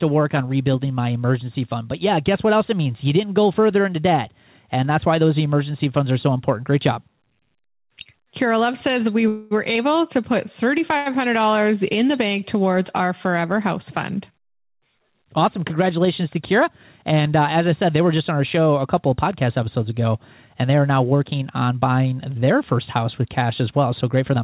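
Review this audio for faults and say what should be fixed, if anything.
Call audio freeze at 9.28–9.53 s: the sound is held as a fading buzz for 228 ms, then resumes intact. The likely cause is delayed packets emptying the jitter buffer.

Short stall from a late packet at 10.97–11.17 s, after "able to put": one packet arrived late, so the last sound was stretched by 88 ms with a slight buzz.

Jitter buffer speed-up at 14.30–15.00 s, after "our forever house fund", at 109% speed, and at 22.10–22.75 s, between "are now working on" and "house with cash", at 106%. Pitch-period trimming removed roughly 70 ms and 40 ms respectively, so the speech sounds hurried at an unchanged pitch.

To prevent these, reduce network jitter and bursty delivery on the call path, for example with QoS prioritisation or a less congested route, so the buffer neither runs dry nor overfills.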